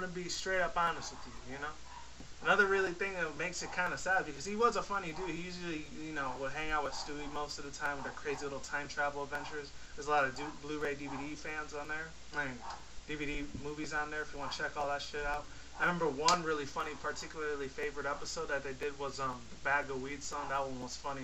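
From 10.81 s to 20.82 s, periodic USB or driver dropouts recur every 2.0 s. Each briefly blocks the audio path, and a few milliseconds are replaced by silence, heard as regular ticks. The waveform shows short gaps, the spectrogram thin vertical broadband lines.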